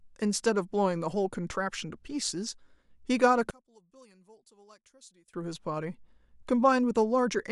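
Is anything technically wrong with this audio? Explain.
Yes. From 3.51 to 5.34 s the speech sinks to a faint residue about 30 dB down. The likely cause is one channel inverted: reversed polarity makes the shared centre cancel when summed to mono. Unlike a dropout, a trace of the channel difference remains instead of silence.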